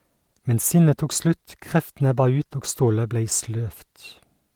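Nothing stood out on listening to this speech, and no technical fault could be heard at any point.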